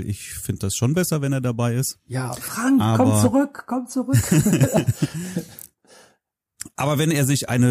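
At 3.95 s a corrupt frame was decoded: bit errors in a couple of compressed frames went undetected, and the decoder rebuilt them anyway, applying misread gains and spectral codes. Energy lands at frequencies the speech never had, for only about a frame's length. What reaches the ear is a tiny chirp-like blip, a momentary flick of misplaced tone peaking at about -40 dBFS, sitting faintly against the speech.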